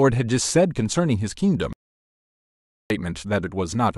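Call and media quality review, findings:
Audio dropout to silence, 1.73 to 2.90 s: speech cuts out mid-flow, about 1.17 s lost entirely. Likely cause is input loss upstream of the encoder, a dropped capture device or link, with silence written through the gap. No room tone through the gap: the gap is silent, not a quiet floor, and speech resumes abruptly rather than fading back.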